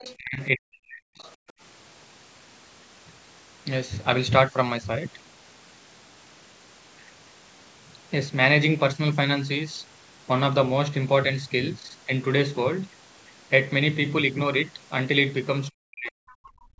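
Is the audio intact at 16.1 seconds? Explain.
No. Speech suppressed in double talk runs from 15.71 to 16.24 s: the talker's level sinks sharply, by about 40 dB at its deepest, for roughly half a second. The likely cause is an echo canceller that, with both sides talking, could not separate talker from loudspeaker echo and turned everything down. Inside that dip, from 16.07 to 16.11 s, the other side's voice leaks through as a faint scrap, about 30 dB below the speech, likely loudspeaker playback that the canceller failed to remove from the microphone.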